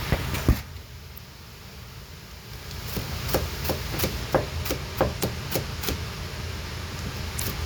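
Damaged data in a compressed stream breaks the sound three times, at 1.14–1.18, 5.19–5.23 and 7.36–7.40 s, as roughly 40 ms disruptions where the decoder misreads corrupted frames and loses sync. Each shows as a brief disturbed patch on the spectrogram.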